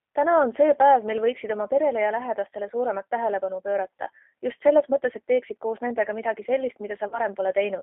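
From start to end, the speech carries G.729 codec damage. The 8 kbit/s coder rebuilds each short frame from a vocal tract filter, a pitch predictor and a few pulses. The line band runs from 250 Hz to 3.4 kHz. The voice sounds plainly rough, thin and synthetic.

At 7.08 s, VoIP packet loss concealed by the speech codec takes over. About 40 ms of audio is missing, which fits four lost 10 ms frames. The decoder repeats its last pitch and filter at falling gain. A stretched, fading sound fills the gap until 7.19 s.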